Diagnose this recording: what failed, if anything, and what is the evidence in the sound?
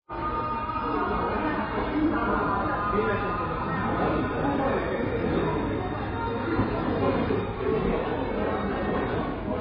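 The failure sits at the codec stage and runs through the whole recording: the sound is heavily damaged by what is likely AAC compression. Nothing is present above 5 kHz, leaving the audio dull and smeared, with a warbling, unstable texture. A simple band-limited path would cut the top cleanly but keep the remaining band steady. Here the encoder starved the quantised frequency lines, which points to a very low bitrate, around 16 kbps AAC-LC.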